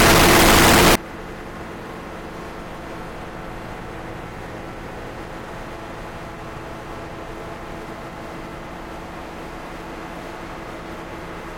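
Signed and unsigned mixed up, from 0.0 to 0.95 s: loud, harsh distortion where soft sounds match strong ones, likely from 16-bit samples read with the wrong sign, flipping the top bit so every zero crossing jumps across the full range.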